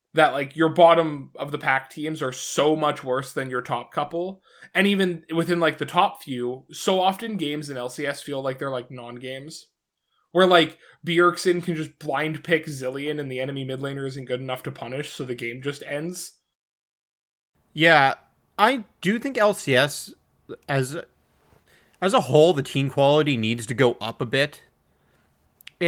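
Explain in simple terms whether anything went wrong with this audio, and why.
Nothing went wrong; the recording sounds as it should.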